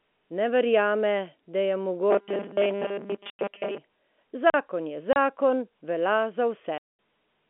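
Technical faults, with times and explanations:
2.11–3.79 s, robotic sound from repeated short buffers: the speech turns into a rigid, metallic buzz at 200 Hz. This is likely from audio arriving too seldom, so about 5 ms chunks keep replaying while most of the real sound is skipped.
3.30–3.39 s, 5.13–5.16 s and 6.78–6.86 s, packet loss filled with silence: the speech drops into hard-edged holes, with lengths that fit 30 ms packets going missing.
4.50–4.54 s, block of digital silence: a 40 ms stretch is replaced by zeros, cutting off and back with no fade. You hear a short hole.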